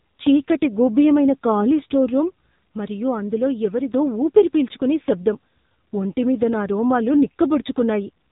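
Throughout, the speech carries heavy AMR narrowband mobile codec damage. Nothing passes above 3.8 kHz, and the buzzy, synthetic tone points to a low mode near 6.7 kbps.

At 2.71 s, after "గూభ్యమైన ఖాళీ స్టోర్ రూమ్", a sudden gain jump drops speech and background together by about 4 dB. The level recovers at 3.91 s, before "ఊపిరి పీల్చుకునే శబ్దం". This is likely a digital gain step applied without a ramp.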